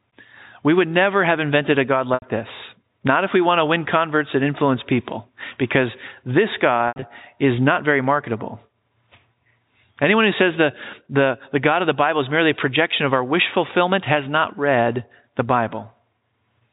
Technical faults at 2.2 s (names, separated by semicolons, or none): packet loss with pitch repetition